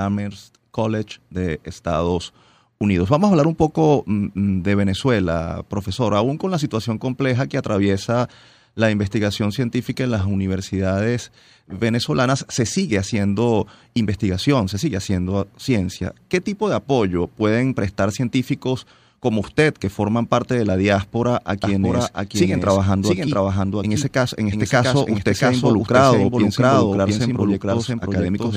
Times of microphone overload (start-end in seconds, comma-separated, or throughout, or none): none